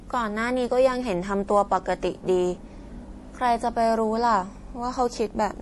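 From start to finish the speech carries plainly audible MP3 compression damage, likely from encoding at a bitrate around 48 kbps. Nothing survives above 11.5 kHz, so the top end sounds dulled, and the starved encoder lets weak frequency lines blink on and off between frames, giving a watery, swirly texture with chirpy s sounds. On a spectrogram this shows as a flat ceiling at 11.5 kHz and speckled, patchy high-frequency energy below it.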